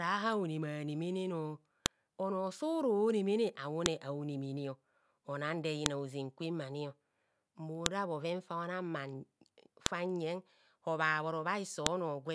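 Speech with a file header played as audio: sharp, loud clicks at 1.86, 3.86, 5.86, 7.86, 9.86 and 11.86 s, one every 2 s wherever joined pieces meet. Each shows as a thin full-height vertical line on the spectrogram and a brief spike in the waveform.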